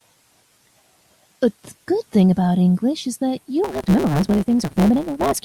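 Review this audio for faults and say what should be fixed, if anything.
From 3.64 s to 5.42 s the speech picks up a 150 Hz buzz and runs about 1.6 times too fast. This is a block size mismatch (truncated): the tail of each block, which fits 512-sample writes, is dropped before the next stage. Matching block sizes between stages, or buffering so that every written sample gets read, would prevent it.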